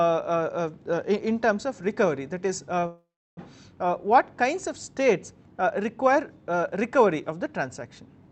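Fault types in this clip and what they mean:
Short stall from a late packet: a packet showed up late, so the receiver held the last sound about 29 ms near 2.79 s, then picked up where it left off.
Call audio freeze: likely packets held up in transit; from 2.86 to 3.39 s the sound stretches, fades, and sits silent for about 0.32 s before resuming intact.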